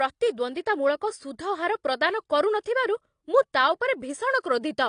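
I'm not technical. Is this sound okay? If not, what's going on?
No. Throughout, the speech sounds dull, with the flaws of an earlier heavy squeeze still in it and nothing above about 9.8 kHz. This is likely low-bitrate audio saved at a high bitrate: a heavily squeezed copy was re-saved as a large file, which cannot restore the lost detail.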